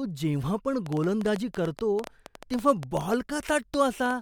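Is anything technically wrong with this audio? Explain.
Yes. A train of clicks runs from 0.86 to 4.12 s, just after "जेव्हा पण": about thirty similar pops at an uneven 7.7 per second, about 10 dB above the speech, likely from interference.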